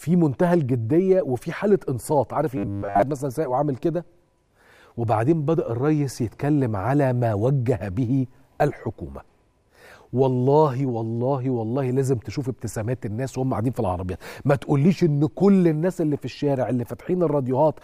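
From 2.57 to 3.02 s the sound turns into a rigid, metallic buzz pinned at about 100 Hz, still loosely tracing the shape of the audio underneath but with its natural movement flattened out. This is robotic sound from repeated short buffers: the likely cause is audio arriving too seldom, so playback loops the last 10 ms or so over and over while the real material is skipped, with repeats filling most of this half-second stretch.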